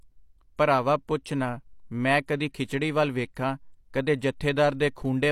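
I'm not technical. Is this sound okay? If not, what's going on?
No. There is a fault called pre-echo at about 3.35 s. Just before a sudden, sharp sound, a short hiss creeps in for about 15 milliseconds. This happens when the audio is squeezed into a smaller file. The squeezing works on short chunks of sound and spreads its noise across the whole chunk. So noise meant for the loud moment leaks into the quiet moment before it. The sharp sound also comes across soft or smeared.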